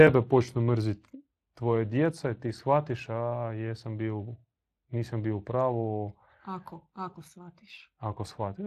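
Throughout the clip, the speech has passed through the Speex codec at a setting that points to roughly 22 kbps, and the CELP model's coarse approximation of the excitation leaves plainly audible coding damage on the speech, while nothing is heard above 15.4 kHz.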